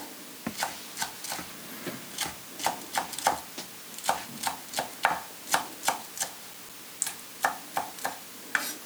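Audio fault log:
6.23–7.15 s, CD scratch ticks: seven brief ticks, each lasting a few milliseconds, at roughly seven per second. A scratch on the disc wipes out more data than error correction can rebuild, once per revolution, so the player interpolates or mutes the damaged samples. Random digital clicks or buffer dropouts fall at irregular intervals. These arrive at a steady rhythm tied to the disc's rotation, and they stop within about a second.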